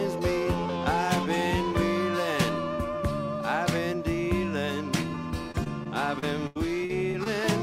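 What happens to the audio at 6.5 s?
At 6.5 s the audio sits inside a run of repeated packet loss that lasts from 5.51 to 7.27 s. Packets went missing or arrived too late eight times, with the longest gap about 84 ms. The receiver covered roughly 250 ms by stretching the last good sound forward, about 14% of the stretch, and left about 260 ms simply absent. The result is choppy audio with pieces missing where the patched fragments repeat.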